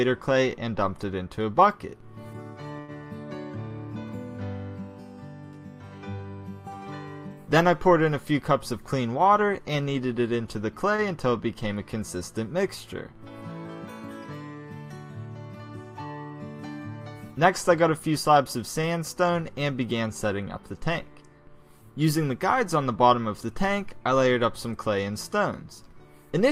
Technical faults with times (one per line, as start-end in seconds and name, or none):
2.79-2.90 short stall from a late packet
8.73-9.75 jitter buffer speed-up
10.96-11.00 short stall from a late packet
17.47-18.37 jitter buffer speed-up